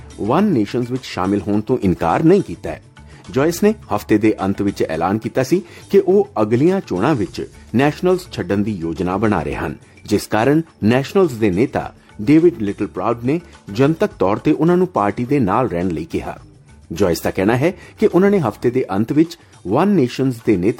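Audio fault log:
No faults heard anywhere in the audio.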